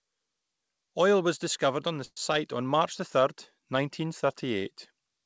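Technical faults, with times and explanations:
2.05–2.17 s, call audio freeze: the sound stalls into a fading buzz, about 40 ms of it silent, then resumes intact, likely from late packets emptying the jitter buffer.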